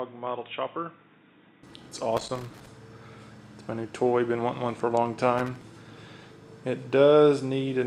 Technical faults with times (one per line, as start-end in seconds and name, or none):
0.00-1.63 input switched to a poorer device
2.13-2.67 loose connector crackle
5.38-5.62 loose connector crackle